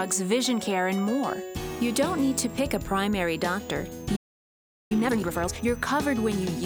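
A switching supply whistle runs through the whole clip. It is a thin, high tone that wanders between roughly 5.9 and 7.7 kHz and sits mostly around 7 kHz. It stays well below the main sound. A switching power supply is running in an audible burst mode or beating with another one, and its pitch shifts as the load on it changes.

At 4.16 s a playback stall cuts the sound off mid-flow. Nothing is heard until 4.92 s, a gap of about 0.74 s. The player most likely ran short of data, or its processing thread was held up, so the output had nothing to play until it caught up again.

From 4.92 s to 5.66 s, time-compressed catch-up follows the gap. The player clears its backlog by running the audio at double speed. It does this by cutting out small slices and cross-fading across the joins, so the pitch stays normal. The sound comes across as rushed. Normal pacing returns after 5.66 s.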